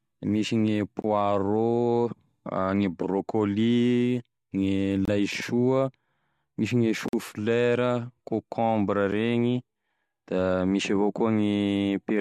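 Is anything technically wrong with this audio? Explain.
Yes. The speech drops into brief, hard-edged silences at 1.02 to 1.04 s, 5.05 to 5.08 s, 7.08 to 7.13 s, and 9.12 s, lasting about 20, 25, 48 and 6.5 ms. These are gaps between stream segments. The timestamps of adjacent 2-second segments fail to meet, and the player fills the space with silence, so the holes fall on segment boundaries and nothing is lost. The timeline simply stretches slightly at each one.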